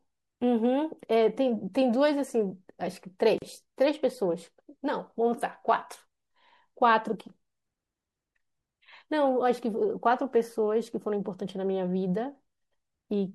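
Throughout the speech there is plainly audible MP3 compression damage. The sound is watery and swirly, sibilants turn metallic and chirpy, and consonant attacks smear. The likely cause is an MP3 encode at a low bitrate, which fits something near 64 kbps. With too few bits, the encoder drops weak frequency lines and cuts the treble. On a spectrogram the top band ends at a flat ceiling, and speckled holes flicker on and off below it.

From 3.38 to 3.42 s a gap at a join of encoded pieces drops in a silence of about 37 ms. The speech stops abruptly and then carries on from exactly where it left off. This happens when separately encoded segments are joined without trimming, so each one's startup delay and end padding remain as dead air. The waveform shows a short flat line with slightly smeared edges, and the spectrogram shows a narrow vertical blank strip across all frequencies.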